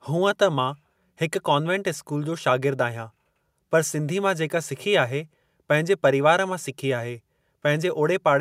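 A speech recording with no technical faults to point to. Nothing in it calls for a time or a cause.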